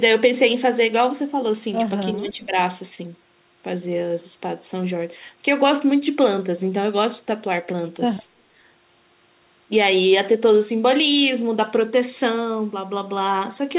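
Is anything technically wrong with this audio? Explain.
Yes. From 2.15 to 2.54 s there is speech suppressed in double talk: the echo canceller likely mistook overlapping far-end sound for echo and turned the talker down too, so for about 400 ms the speech dips by roughly 10 dB.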